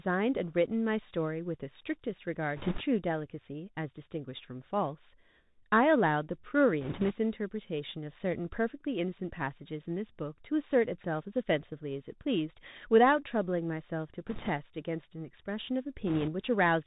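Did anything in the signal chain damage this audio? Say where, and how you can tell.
Yes. At the codec stage, a Bluetooth CVSD headset codec band-limits the speech to below 4 kHz throughout. Its one-bit delta steps leave scratchy s sounds and a granular hiss, which fits a 64 kbps link.

At the network stage, bit errors on the Bluetooth voice link flip a few percent of bits at 2.56–2.82 s, 6.81–7.14 s, 14.27–14.51 s and 16.07–16.30 s, causing bursts of rushing crackle without loud clicks.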